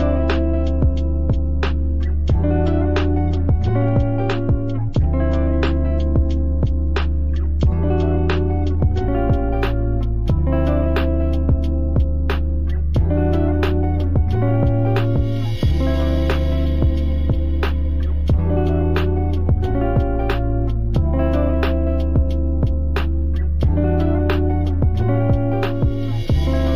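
From 9.02 s to the end there is imaging from linear upsampling. Straight-line interpolation from 16 kHz to 48 kHz dulls the top of the band and leaves a mirror image from 8 to 16 kHz, about 45 dB down, heard as a faint metallic shimmer on bright content.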